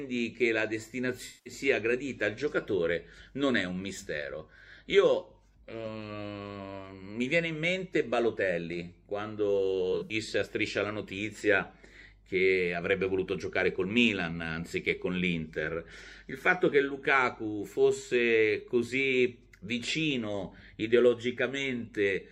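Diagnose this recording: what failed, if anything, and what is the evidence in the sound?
The codec stage dropped AAC frames and the decoder used frame loss concealment. From 1.26 to 1.53 s, a loss of about 190 ms points to roughly nine lost frames, and the decoder rebuilt them from the last good spectrum, giving a smeared, noisy, phasey patch. From 9.92 to 10.13 s, shorter losses are scattered over about 170 ms, the longest run near 70 ms, so real and concealed frames alternate there.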